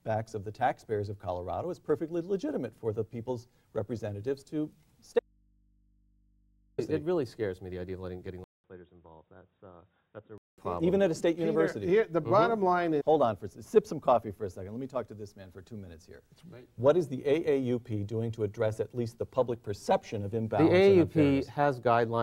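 From 5.19 s to 6.78 s the sound cuts out abruptly for about 1.6 s, leaving only mains hum around 40 dB below the signal. This audio dropout to a faint residue likely comes from a lost signal on a still-live input. The waveform collapses to a thin band, and the spectrogram holds only low hum lines.

At 8.44 s a 200 ms silence is followed by a duller, boxier sound about 10 dB quieter, with nothing above 3.8 kHz, until 10.58 s. This is an input switched to a poorer device, likely a narrower-band microphone or headset. The spectrogram shows a hard ceiling at 3.8 kHz and a new noise floor roughly 50 dB down.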